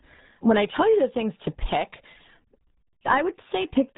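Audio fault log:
Throughout: RealAudio 14.4 codec damage, heavy. The speech is muffled and gargly with nothing above 3.8 kHz, which fits a low-rate dial-up speech codec around 8 kbit/s.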